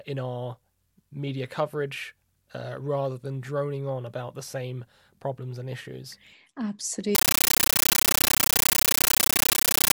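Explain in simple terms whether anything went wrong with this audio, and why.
From 7.15 s to the end, the speech is replaced by loud, harsh chattering static. This is a compressed stream played as audio. The sound points to a Dolby Digital stream that should have been decoded first. Instead, its raw data was played as if it were ordinary sound. Each chunk of data comes out as a short blast of noise, about 13 ms long, followed by silence. This repeats about 31 times a second, which makes the rattling texture.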